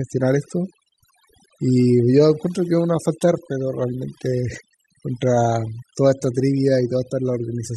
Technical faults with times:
0.00-7.77 overdone noise removal

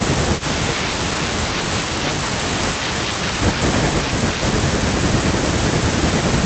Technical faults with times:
0.38-0.43 echo leak

